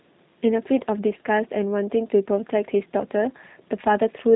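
Speech carrying G.729 codec damage from start to finish: the voice sounds rough and faintly synthetic, rebuilt from a vocal tract filter and sparse pulses in a way that fits an 8 kbit/s stream. A spectrogram shows energy ending abruptly at 3.8 kHz, with nothing above.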